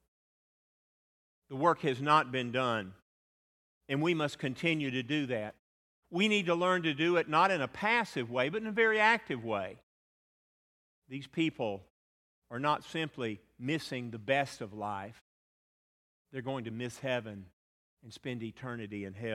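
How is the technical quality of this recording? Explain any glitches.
No technical faults are audible.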